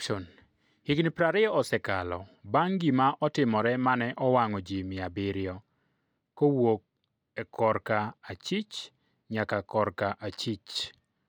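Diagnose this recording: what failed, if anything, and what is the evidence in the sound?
Nothing failed here: listening across the whole speech recording, there's no point where the signal chain gives itself away, so there's nothing to diagnose.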